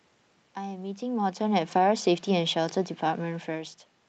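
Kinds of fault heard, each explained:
Automatic gain falling: the gain control judged the input too loud or its background noise too strong and eased its gain down about 4 dB from 1.04 to 3.47 s, so the waveform envelope and the room-noise floor on the spectrogram sink together.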